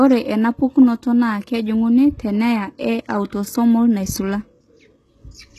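Speech, carrying plainly audible HE-AAC compression damage from start to finish. Nothing is present above 12.3 kHz, and the treble below that edge sounds synthesized rather than captured: sibilants come across gritty and lispy, with a metallic sheen. That fits spectral band replication, where lower bands are copied upward and shaped by a coarse envelope, so the rebuilt harmonics fail to line up with the real ones. The likely source is a very low-rate encode, consistent with roughly 16 kbps HE-AAC.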